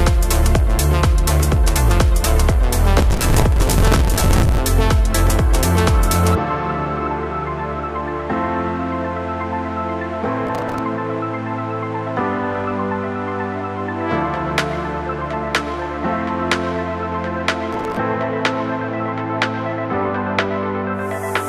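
Processor overload crackle at 2.98 to 4.58 s, 10.47 to 10.79 s and 17.73 to 17.97 s: the processor misses many short buffer deadlines in a row, around 5 ms each, replaying stale audio as gritty tearing.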